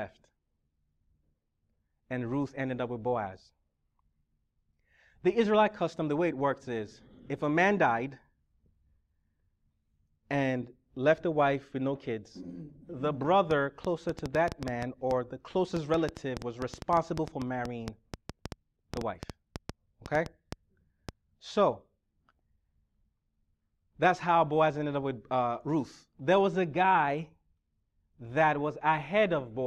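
From 13.51 to 21.10 s a train of clicks ticks over the speech, around 40 similar pulses at about 5.7 per second, unevenly spaced and peaking about 10 dB above it. This is likely interference or a faulty connection or power supply. Unlike random crackle, the clicks share one shape and persist through pauses.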